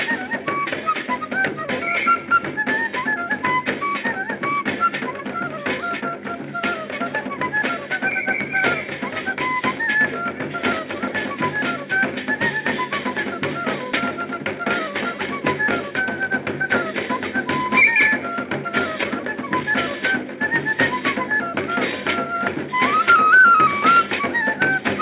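Nothing is technically wrong with this sound, which has passed through a call path using G.711 mu-law at 64 kbps, with nothing above 4 kHz.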